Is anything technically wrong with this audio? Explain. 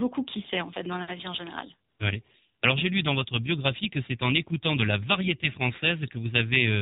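Yes. The whole clip is speech carried through the AMR narrowband mobile codec. Nothing above 4 kHz survives, and the pulse-driven vocal-tract model makes the voice buzzy and synthetic, which fits a low 7.4 kbps mode. Unlike a simple low-pass filter, the codec also adds metallic, artificial texture.

From 1.90 to 2.00 s, just after "la vie en général", there is AMR comfort noise. For about 100 ms the phone sent no speech frames, and the receiver filled the gap with smooth synthetic hiss. Unlike a dropout, the gap is noise-filled rather than silent, and it switches in abruptly.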